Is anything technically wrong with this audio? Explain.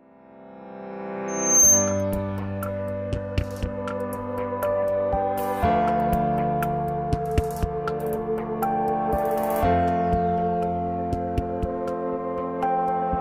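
Yes. From 1.28 s to 2.04 s there is a loudspeaker feedback squeal. A microphone was picking up the loudspeaker it was feeding, and at around 6.3 kHz the loop's gain rose above one, so that frequency kept amplifying itself. In the sound this becomes a thin, piercing tone that swells over about a third of a second until it sits about 10 dB above the rest of the audio, then stops.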